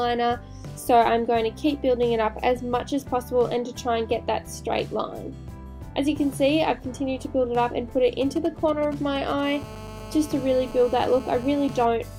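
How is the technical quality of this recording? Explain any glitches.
The recording is marred by interference from a nearby 2G mobile phone, first as signalling bursts and then as a continuous buzz.

GSM signalling bursts, 8.21 to 9.41 s: a nearby phone sent short groups of radio bursts, as it does while handshaking with the network, and the audio circuitry demodulated them by rectification. The result is a galloping dit-dit-dit of brief buzzes with a 217 Hz pulse rate, sitting roughly 15 dB below the wanted sound.

GSM phone buzz, 9.43 to 11.85 s: the same phone then began transmitting steadily, as in an active call, pulsing 217 times a second. The circuitry rectified each radio pulse into an audio click, and these fuse into a steady, hard, raspy 217 Hz buzz rich in harmonics. It runs at about 16 dB below the signal and bears no relation to the recorded material.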